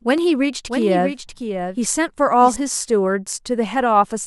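From 0.68 to 2.56 s the speech has a doubled audio track: a second full-band copy trails around 0.7 s behind, somewhat quieter, likely from a slower duplicate capture path. Unlike an echo, it has no decay or room colour and starts and stops abruptly.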